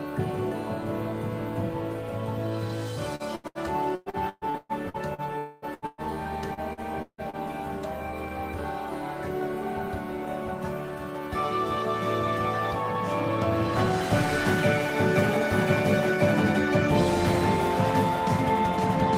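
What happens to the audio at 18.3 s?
Nothing goes wrong at 18.3 s; the audio there plays through intact, with no dropout, click or distortion.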